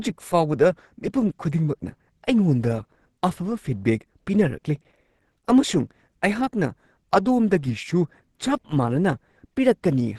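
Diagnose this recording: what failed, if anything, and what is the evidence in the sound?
Codec stage. Throughout, the speech is muffled and hoarse, with nothing above 12.1 kHz. Likely Opus compression in hybrid mode, fitting about 16 kbps.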